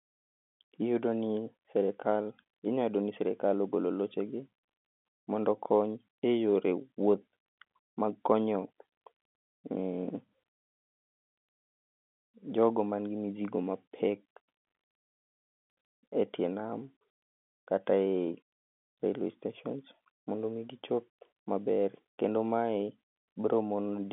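At 2.64 to 2.68 s, bit errors on a digital phone line flip a few bits on the G.711 line. Each error changes one sample, and a hit on a high bit or on the sign of a loud sample produces a brief, sharp tick.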